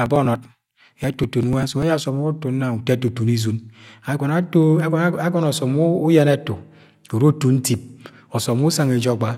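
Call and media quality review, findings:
Periodic USB or driver dropouts, 0.06 to 1.82 s. Regular ticks about every 0.098 s, around twenty in all, each skipping roughly 2 ms of speech rather than filling it with silence. Probable component: USB audio interface or its driver, blocked at a fixed interval by a background task. Differs from network packet loss or random clicks because the spacing is strictly even, and the ticks sound only while there is signal.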